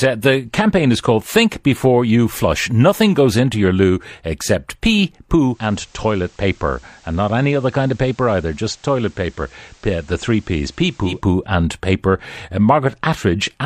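Digital radio blending to analogue runs from 5.44 s to 11.27 s, just after "your loo except pee" and ending before "and paper". The receiver lost its digital stream and cross-faded over about 0.25 s to the station's FM broadcast, returning the same way later. While on FM, the speech drops about 3 dB in level and carries a steady hiss roughly 30 dB beneath it.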